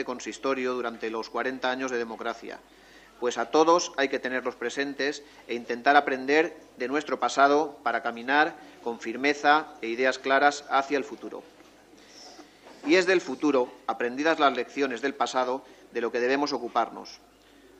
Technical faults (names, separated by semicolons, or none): none